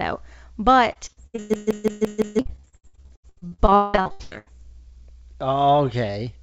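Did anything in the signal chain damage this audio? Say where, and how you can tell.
Yes. Repeated packet loss (robotic sound) sits in the network stage, from 0.92 to 4.48 s: forty gaps, the longest 181 ms, each patched by stretching the preceding sound, so over half that span is concealment. The speech turns choppy, with pieces missing.

A system hang loop came from the driver or buffer stage, from 1.54 to 2.39 s. A frozen process left the hardware cycling one 170.67 ms slice five times at 5.86 Hz, a machine-gun stutter that fits an 8192-sample buffer, losing roughly a second of speech.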